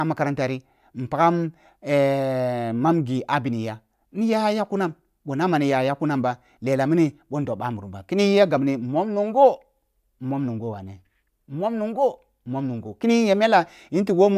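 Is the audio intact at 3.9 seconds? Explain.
Yes, the speech at 3.9 seconds is intact, with no dropout, click, distortion or other fault at that moment.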